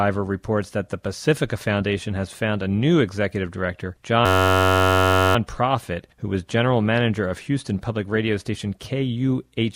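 A system hang loop runs from 4.26 to 5.36 s: while the system stalled, the hardware replayed one 10.67 ms slice, fitting a 512-sample buffer, producing a steady 93.8 Hz buzz.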